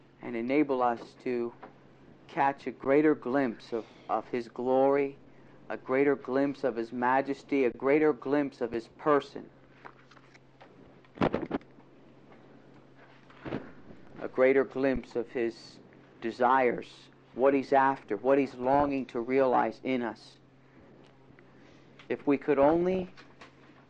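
The audio sounds dull, with a gurgling, granular texture across the whole clip, likely from MP2 compression at a low rate that has switched off upper sub-bands. Four brief underruns with held sample occur at 2.84 s, 7.72 to 7.74 s, 8.74 s and 14.96 s. The waveform freezes flat for roughly 4 to 23 ms, then resumes where it stopped, with no hard click. The 12 ms gaps fit a 512-sample buffer. DAB burbling appears at 10.78 to 11.75 s, 13.24 to 14.22 s, 18.50 to 18.89 s and 22.63 to 23.09 s. Small bit error rates put wrong samples into single sub-bands, causing short blips of noise.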